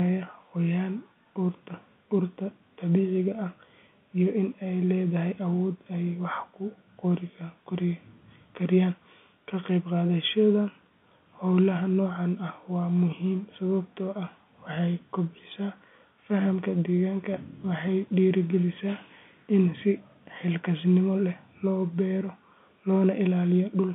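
No faults are audible in this speech, which sits in the narrow telephone band typical of G.711 telephone coding with only the faint level-following grain of that format.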